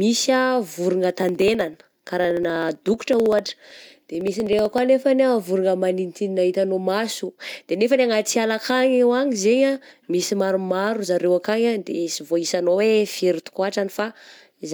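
From 1.23 s to 4.78 s, something in the system blocks the USB bus or audio driver every 63.5 ms, causing periodic USB or driver dropouts. Each time, roughly half a millisecond of audio is skipped outright rather than filled with silence, so the waveform jumps at each gap. Over the speech this comes through as a steady train of around fifty ticks, about sixteen per second, heard only while there is signal.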